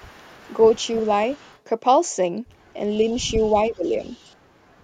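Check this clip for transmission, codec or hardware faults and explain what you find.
Two faults are audible, both pointing to echo cancellation on a speakerphone at the far end.

Echo leak: the far-side echo canceller likely failed to remove all of the loudspeaker sound reaching its microphone, so some of it was sent back. A faint delayed copy of the speech, trailing by 373 ms and well below the main speech (roughly 30 to 40 dB down), appears at 0.00–1.08 s, 1.28–1.59 s, 3.09–3.15 s, 3.41–3.57 s and 3.86–4.35 s.

Speech suppressed in double talk: between 2.98 and 4.13 s both sides are active at once, and the canceller cannot tell the local talker from the returning echo, so it turns everything down. The speech dips by up to about 10 dB, in pieces adding up to roughly half a second. This stretch overlaps the later echo fragments.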